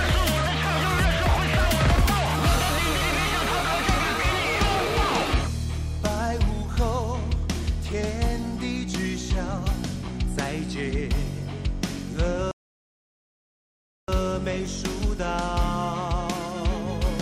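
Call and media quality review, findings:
Playback stall, 12.51 to 14.08 s. Output drops to full silence for 1.57 s mid-flow, then resumes. Likely player starvation or blocked audio thread. Distinct from a dropout or packet-loss gap: one long clean hole, no concealment smearing, no repeated chatter before or after.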